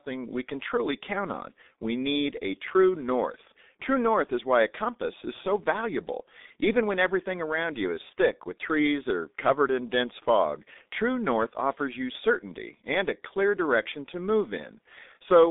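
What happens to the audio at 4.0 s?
At 4.0 s the speech carries the same G.723.1 codec damage present across the whole clip. Low-rate coding, consistent with about 6.3 kbit/s, leaves nothing above 3.8 kHz and a band of roughly 250 Hz to 3.7 kHz, so the voice sounds muffled and hoarse, with smeared consonants.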